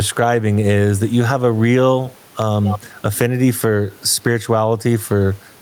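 A short speech recording with gain pumping running the whole way through. The gain swings by something like ten decibels. The room noise sits about 39 dB below the speech. The likely cause is input gain set far too high, with a fast limiter or compressor clamping down on every loud sound, so everything ends up squashed and flat.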